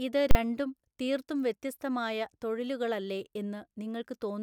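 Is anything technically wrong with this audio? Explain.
Yes. From 0.31 to 0.35 s, invalid numbers at full scale: a failed calculation pinned 40 ms of the speech to one extreme value, heard as one loud bang and seen as a flat clipped waveform slab with a broadband spectrogram stripe.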